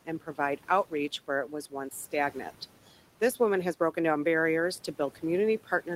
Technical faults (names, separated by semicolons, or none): noise suppressor artifacts